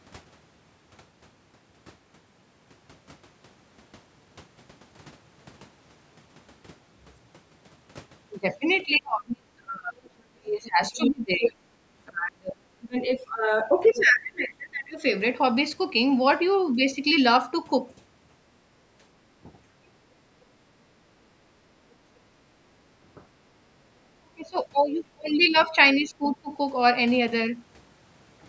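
From 8.85 to 15.02 s the speech is pushed down in pieces, dropping by as much as about 30 dB for roughly five seconds in total. This is speech suppressed in double talk. With both sides talking at once, the echo canceller likely could not tell the local talker from the loudspeaker echo and turned everything down. The level falls only while the far side is active, which sets it apart from a network dropout or a gate.

Inside that stretch, the other side's voice leaks through twice. From 11.01 to 11.47 s it is about as loud as the talker. From 13.86 to 14.05 s it is much fainter, roughly 20 dB down. This second voice is likely leftover loudspeaker sound that the canceller missed. It is a separate talker laid over the speech, which distinguishes it from a room reflection or a repeat of the talker's own voice.

The suppression returns at 16.7–16.98 s (slight, about 5 dB), 19.45–19.49 s (about 10 dB), 24.2–24.58 s and 25.15–25.36 s (both deep, about 30 to 35 dB), and 25.95–26.5 s (about 15 dB). 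These are short, and they follow the far side's speech. Throughout, the call microphone processing leaves nothing above 8 kHz.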